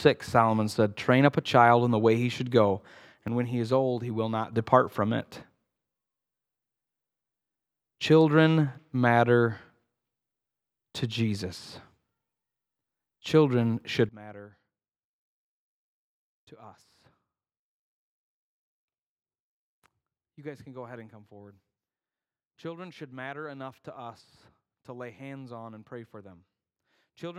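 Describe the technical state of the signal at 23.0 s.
At 23.0 s the signal sits inside a sudden gain jump running from 14.09 s to the end: a digital gain change, likely applied without a ramp, drops speech and background noise together by about 20 dB.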